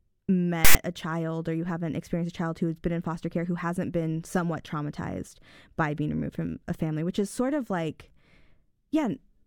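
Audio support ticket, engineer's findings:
Decoder reading file tags played as audio: text metadata block passed to output as sample data. Symptom at 0.65–0.75 s in the speech, roughly 0.1 s: loud rasp pushed off to one side, hard-edged start and stop like a burst of static. Component: file parser/demuxer.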